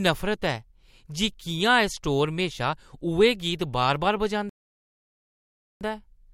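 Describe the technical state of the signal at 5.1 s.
At 5.1 s the signal is silent: the speech has stopped dead and stays silent from 4.49 s to 5.81 s, then carries on from exactly the point where it broke off, with nothing skipped. This is a rebuffering stall. Playback used up all the audio it had downloaded and had to wait for more data before continuing, so the clip gains about 1.32 s of dead air without losing any content.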